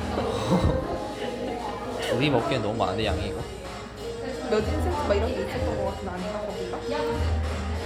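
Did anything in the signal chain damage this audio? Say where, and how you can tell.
No, nothing along the chain from capture to playback has left a mark you can hear on these everyday sounds, so there's no stage to point to here.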